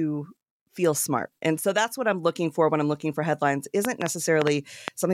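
Right after "I'm looking for headlines", from 3.85 to 4.89 s, a train of clicks comes in: about seven sharp, similar ticks at roughly 4.85 per second, unevenly spaced, sitting around 20 dB above the speech. It's likely interference or a faulty connection or power supply.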